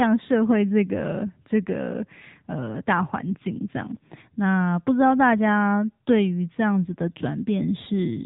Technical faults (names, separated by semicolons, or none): AMR narrowband mobile codec